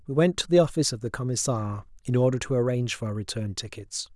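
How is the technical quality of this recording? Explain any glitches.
No technical faults are audible.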